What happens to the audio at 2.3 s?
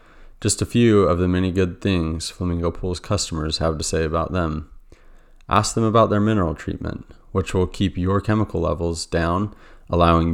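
Nothing goes wrong at 2.3 s; the speech carries on intact through that moment.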